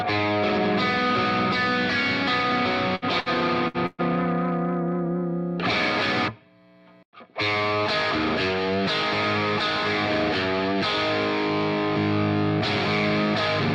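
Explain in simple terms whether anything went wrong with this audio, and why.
Four bursts of packet loss hit the audio between 2.95 and 4.01 seconds. Each time, the receiver stretched the last sound into a brief, fading buzz or hiss before jumping ahead. The gaps are at 2.95–3.05, 3.20–3.29, 3.68–3.77 and 3.86–4.01 s, and each one skips about 60 ms of audio, except the last, which skips 120 ms.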